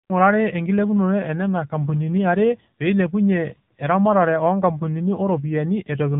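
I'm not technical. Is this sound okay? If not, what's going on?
No, the speech runs through an AMR narrowband mobile codec the whole way, the way old phone networks squeeze calls. Everything above about 3.8 kHz is gone, so it sounds thin and muffled, and the squeezing leaves it plainly processed and a bit artificial.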